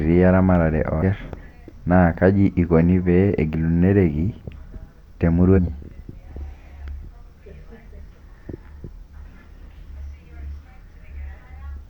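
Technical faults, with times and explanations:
0.98 to 1.03 s and 5.53 to 5.59 s, compressed frames skipped: the speech jumps forward twice, losing roughly 0.4 s at the first point and roughly 0.2 s at the second, as runs of whole compressed frames go missing or are rejected by the decoder. The step size is a multiple of a 46.4 ms frame. Each jump is heard as a short glitch of about 50 ms at the join.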